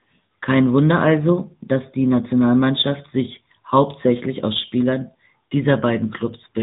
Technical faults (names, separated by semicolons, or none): AMR narrowband mobile codec